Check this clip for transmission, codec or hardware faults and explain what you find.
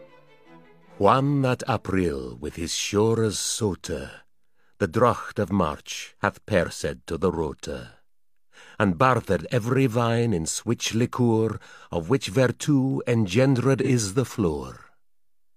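One fault turns up, near the end. From 13.83 to 13.89 s there is AAC frame loss with concealment. The decoder rebuilt the missing stretch from the last good spectrum. That leaves a brief smeared, noisy patch. Its length fits one lost frame of about 43 ms.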